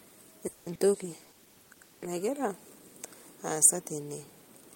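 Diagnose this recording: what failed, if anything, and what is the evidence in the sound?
Call audio freeze at the network and jitter-buffer stage: from 0.47 to 0.68 s the last sound is stretched into a fading buzz lasting about 190 ms, then the audio resumes where it stopped. The likely cause is delayed packets draining the buffer. A spectrogram shows smeared, decaying harmonics; the waveform shows no dropout.

Short concealed packet loss, also at the network stage, occurs at 0.74 to 0.77 s and 0.93 to 0.96 s. Each causes a brief smear or wobble, where roughly 20 ms of real signal never arrived and about 10 ms was synthesized from the preceding sound. A spectrogram shows blurred vertical slivers with softened onsets.

Call bitrate drop at the codec stage: from 0.94 to 2.20 s the encoder falls from 40 to 16 kbps and stays at the lowest rate for 1.18 s. The sound turns rough and muffled. 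On a spectrogram the upper band thins out or disappears, and coarse, blocky texture replaces fine detail.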